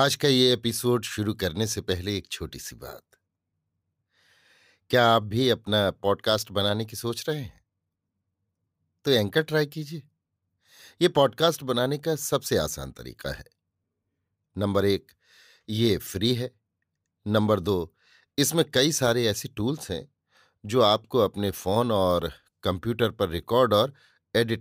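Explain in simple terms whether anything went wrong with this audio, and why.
Nothing went wrong with the signal: the speech comes through steady and intact, with no technical fault anywhere in the recording.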